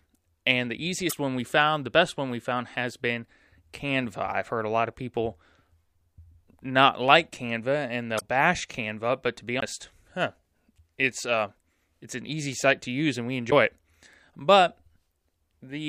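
At 1.06 to 1.13 s, just before "one we found the", the speech briefly breaks up. This is damaged data in a compressed stream: some bytes in the coded frames are wrong, so the decoder misreads that stretch, loses frame sync and resumes at the next valid header. The same kind of glitch comes back at 8.17 to 8.22 s. At 9.61 s, right after "but to be", there is a CD skip. A very short mute, roughly 20 ms, is followed by the speech carrying on from a different point. The pickup has jumped to another turn of the disc's spiral, so the audio does not continue smoothly across the gap. At 13.47 to 13.52 s, after "to use and we", a third burst of stream corruption produces another brief break as the decoder loses sync again and picks up at the next intact frame.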